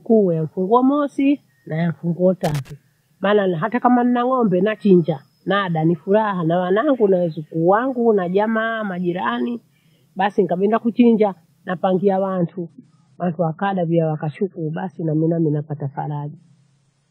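A speech recording with two faults. A worn or dirty contact makes and breaks briefly, a loose connector crackle, chopping the signal into an irregular burst of scratching from 2.44 to 2.71 s, just after "wa mosi na mfunguo". From 12.36 s to the end, the adaptive stream switches to a lower bitrate, consistent with a drop from 96 to 24 kbit/s AAC. The treble suddenly disappears above 10 kHz, with no gap, and the sound turns duller and more artefact-laden.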